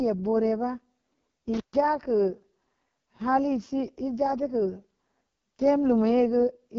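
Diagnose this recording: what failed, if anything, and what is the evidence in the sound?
The whole clip has gone through the AMR wideband (HD Voice) codec, and hard. The speech is rough and raspy all the way through, with nothing above 7 kHz and only a thin, noisy shimmer above the coded band. That level of damage fits the bottom AMR-WB mode, around 6.6 kbit/s, where the pulse-excited vocal tract model runs short of bits and the 6.4 to 7 kHz band is just shaped noise.

Separately, there's an intermittent contact in the analogue wiring between 1.54 and 1.76 s. The sound crackles, drops out for roughly 0.13 s, then crackles back in, with only faint hiss in the gap. That's what you get when a plug or cable conductor briefly lifts off and the signal path opens, so you'll want to reseat or replace the cable on that chain.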